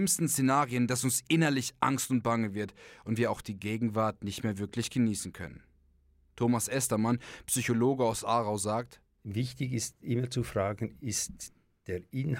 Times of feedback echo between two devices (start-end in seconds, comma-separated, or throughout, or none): none